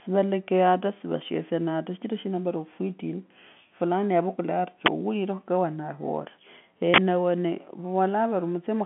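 Speech over a telephone line, with G.711 coding removing everything above about 3.7 kHz. Two uninitialised buffer faults sound as a loud crack or burst of digital noise, at 4.86 to 4.88 s just after "yavukula ari" and at 6.94 to 6.98 s. Buffers were played before audio was written to them. Leftover memory came out as samples, in blocks of 20 ms and 40 ms.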